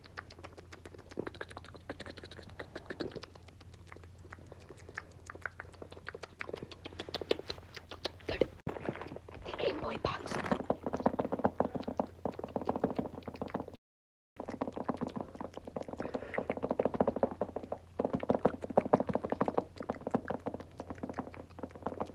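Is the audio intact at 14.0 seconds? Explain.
No. From 13.75 to 14.40 s the sound smears into a fading buzz and then drops to silence for about 600 ms. It returns with roughly 400 ms missing, which points to a long network dropout as the likely cause.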